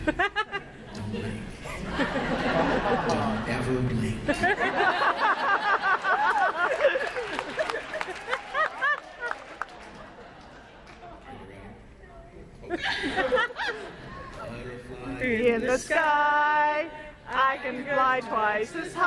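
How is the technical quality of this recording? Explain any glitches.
One fault stands out, from 13.24 to 16.16 s: a resampler restarted on every block. The 48 kHz to 24 kHz conversion treated each 40 ms block in isolation, so every block edge carries a small error, heard as regular ticks at 25 Hz, present only while sound is playing.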